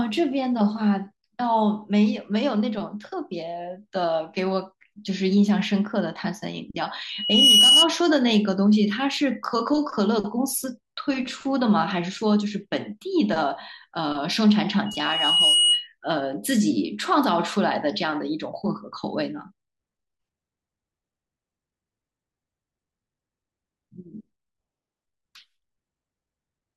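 Speech with loudspeaker feedback squeal twice, from 7.09 to 7.90 s and from 14.86 to 15.88 s, both at 2.9 kHz. A microphone is hearing its own loudspeaker, and at that frequency the loop's gain tops one. Unlike a steady interfering whistle, each tone swells from nothing, in under half a second the first time and nearer three-quarters of a second the second, peaking about 10 dB and then about 5 dB above the speech.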